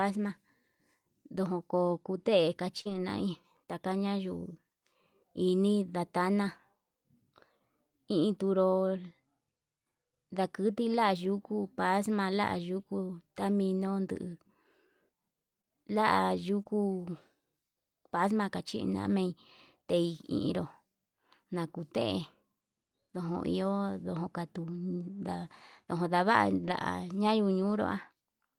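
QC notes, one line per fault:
2.81–2.87 s, 15.61 s, 16.63–16.67 s: short concealed packet loss. Audio arrived too late for the decoder (about 40 ms at 2.81 s, 20 ms at each of the others). The receiver covered each hole by extending the preceding speech, carrying on its pitch when voiced and using shaped noise when unvoiced, then crossfading back to real audio. Each spot is heard as a brief smear or wobble in the speech.
2.85–2.99 s, 16.67 s, 26.63–26.73 s: lost packet rebuilt from error correction. Packets went missing, but the packet that followed each one carried a low-bitrate backup copy, and the decoder played that copy in its place. There is no gap. Instead, about 80 ms, 20 ms and 60 ms of speech sound rougher and noisier. The 80 ms span fits four 20 ms packets. The first and second spans follow directly on the concealed losses at 2.81 s and 16.63 s.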